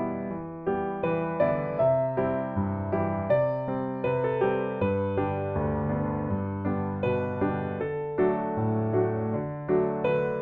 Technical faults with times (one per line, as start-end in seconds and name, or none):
none